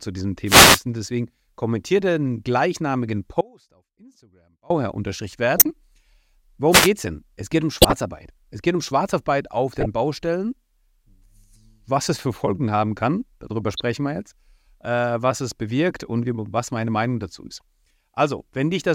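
From 0.46 to 0.81 s the radio link of an analogue FM microphone fades as reflected paths cancel, and the receiver's own noise rises over the voice. This wireless microphone noise hit comes through as a brief swish of static. The same thing happens again from 6.71 to 6.89 s, a shorter burst with the same hissing, swept character partly covering the speech.

Between 3.41 and 4.70 s the wanted signal is most likely lost somewhere upstream while the path after the break stays live, so the sound cuts out abruptly for about 1.3 s. In this audio dropout to a faint residue, the gap is not silent. A faint trace of sound remains, roughly 30 dB below normal level, and the speech returns just as suddenly, not fading back in.

Starting at 5.57 s, a compressed stream carries frames with flipped bits that the decoder plays anyway. Misread gains and codes put energy at the wrong frequencies. Each corrupt frame decoded lasts only tens of milliseconds. 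The first burst runs 5.57 to 5.65 s and sounds like a harsh chirp close to full scale. Similar loud blips follow at 7.82 to 7.93 s and 9.73 to 9.86 s. A quieter squeak comes at 13.60 to 13.80 s, and its spread fits several consecutive damaged frames.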